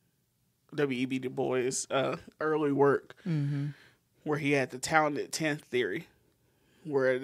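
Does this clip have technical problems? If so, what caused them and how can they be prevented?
No, there are no technical problems in this speech clip. With nothing gone wrong, there is no cause to trace and nothing that needs preventing.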